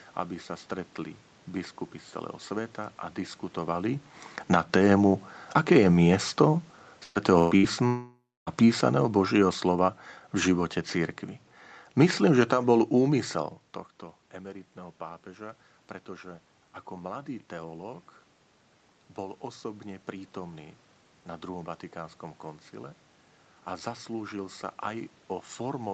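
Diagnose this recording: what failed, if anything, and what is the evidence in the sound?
First up is the call processing stage: an automatic gain falling event. Right after "celého sveta a diskutovali" the AGC starts pulling its gain down, from 4.39 s through 13.41 s, about 10 dB in all. The voice and the room background sink together, which is the giveaway that it's gain rather than the talker. The AGC decided the input was too loud, or the noise too strong for its starting gain, and eased off over several seconds.

Then there's a burst of packet loss on the network side, three quick hits: 7.03 to 7.18 s, 7.39 to 7.54 s, and 7.57 to 7.66 s. The receiver papers over each gap by carrying the last bit of sound forward and fading it, for roughly 114, 119 and 63 ms. Each time it picks up further along, so about 120, 120 and 60 ms of audio are simply gone. You hear a stretched, dying tail and then a jump.

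Right behind those, from 7.87 to 8.50 s, there's a longer hole that sounds like a long network dropout, likely the same network trouble getting worse. The receiver extends and fades the last sound for about 0.6 s, and the last 270 ms of that is plain silence. When audio returns, roughly 0.6 s of material has been skipped. That's a much bigger bite than the short bursts just before it.

Last is an automatic gain rising stretch, 14.31 to 18.06 s. Around 13.5 s the talker backs off the mic and the input drops by about 16 dB. The AGC responds by slowly bringing its gain up, about 4 dB over those few seconds, and the voice and background swell together. It only claws back part of what was lost, so the level ends up noticeably lower than before the move.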